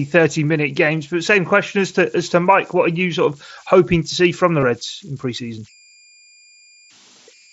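A speech recording carries converter idle tones all the way through: an undithered delta-sigma converter, handed very small signal levels, settles into repeating bit patterns that come out as a thin whistle around 2 kHz, with the error sitting about 31 dB below the speech. It is most exposed in the pauses and adds a grainy texture under the quieter syllables. On a spectrogram it shows as a faint horizontal line near 2 kHz, brightest between words.

From 4.60 to 4.63 s there is concealed Bluetooth headset packet loss. Voice packets between headset and phone went missing, and the receiver patched the roughly 22 ms gap by looping the best-matching piece of the preceding waveform, which points to a run of about three lost packets. It is heard as a brief buzzy hold at full level with a slight warble as real speech resumes, through the mSBC wideband link's light coding texture. The waveform shows a short stretch of near-identical repeated cycles, and the spectrogram shows smeared harmonic bands with a small discontinuity at 4.63 s.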